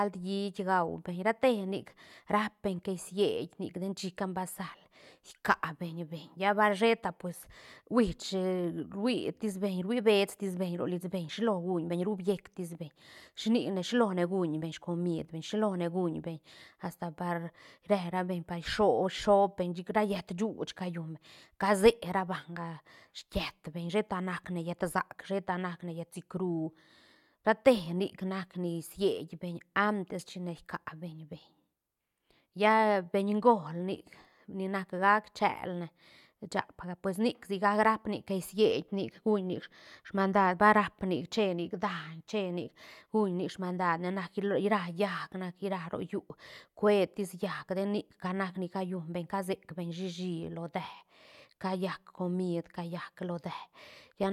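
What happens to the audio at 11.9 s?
Nothing goes wrong at 11.9 s; the speech carries on intact through that moment with no dropout, click, distortion or other audible fault.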